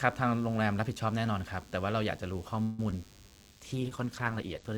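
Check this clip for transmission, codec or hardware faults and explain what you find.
Four faults are present: a constant buzz, a freeze, a brief concealed dropout and a bitrate drop.

A DECT cordless phone buzz runs under the whole speech clip, about 30 dB below the signal. A nearby handset or base transmits a burst every 10 ms, which the audio circuitry rectifies, giving a thin 100 Hz buzz rich in harmonics. Mains hum at 50 or 60 Hz sounds smoother and carries fewer upper harmonics.

From 2.62 to 2.80 s the sound stalls. The last sound is drawn out as a fading buzz or hiss for about 163 ms, then resumes exactly where it stopped, so nothing is lost and the speech lands late. This is a call audio freeze, likely from packets held up in transit draining the jitter buffer. Unlike packet loss, the stall shifts the timing rather than removing anything.

At 2.91 to 2.93 s there is short concealed packet loss. 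About 20 ms of audio never reached the decoder, and the receiver bridged the hole by extending the preceding sound before blending back. It is heard as a quick smear or wobble. This event is far briefer than the freeze, and here audio is actually missing rather than delayed.

From 3.51 to 4.70 s a call bitrate drop sets in. The bandwidth estimate fell, so the encoder went from 32 to 15 kbps, holding the low rate for about 1.1 s and narrowing the audio band from 20 kHz to 8 kHz. The speech turns muffled and rough. Unlike a loss event, this degradation is continuous and sustained.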